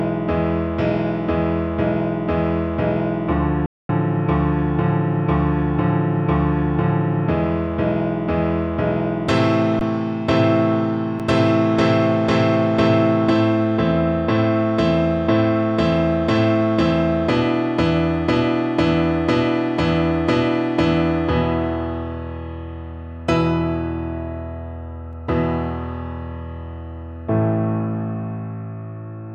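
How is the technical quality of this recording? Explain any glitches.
The recording has two kinds of playback glitch: one audible dropout near the start and three very short freezes later on.

From 3.66 to 3.89 s there is a playback stall lasting about 231 ms. The sound cuts out in mid-flow and then resumes. The likely cause is the player running out of data, or its thread being blocked, so nothing reached the output until it recovered. On a spectrogram this shows as a clean vertical band of near-empty time. On the waveform it is a flat gap.

At 9.79, 11.19 and 25.13 s there are underruns with held sample. Each time the output buffer ran dry and the converter held its last value. The waveform therefore freezes into a short horizontal line of about 17, 6 and 2 ms. The 6 ms gap is 256 samples long. Roughly 20 ms, 5 ms and a couple of milliseconds of audio went missing.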